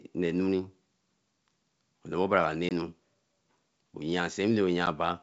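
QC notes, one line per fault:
2.69–2.72 s and 4.86 s, packet loss on an ADPCM call: audio went missing and was filled with silence, about 20 ms in the first gap and 10 ms in the second, which fits roughly two lost packets and then one. The receiving decoder's adaptive predictor and step size then no longer matched the sender's, so each hard-edged hole is followed by slightly distorted speech until it settles some tens of milliseconds later. The G.722 wideband sound around the gaps stays clear up to 7 kHz.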